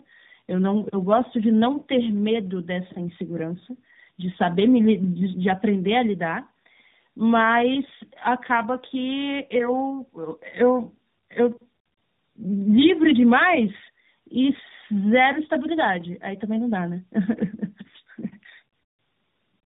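Throughout the speech, tandem speech coding is audible. The sound points to two narrowband speech codecs in a row, consistent with AMR-NB at both ends of a G.711 link. The second coder re-encodes the first's errors, so the speech is rough, muffled and warbly, with nothing above 3.8 kHz.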